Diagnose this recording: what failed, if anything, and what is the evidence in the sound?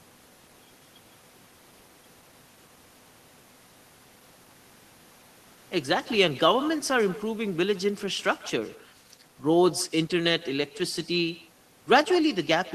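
Every phrase of the speech is trailed, from start to finish, by a faint, thin copy of itself arriving roughly 150 ms later and sitting about 20 dB below the direct signal. That is echo with no canceller, a failure in call processing. The far end is playing the call through a loudspeaker, its microphone picks that playback up, and no echo cancellation strips it out, so the talker's own sound returns after the network round trip.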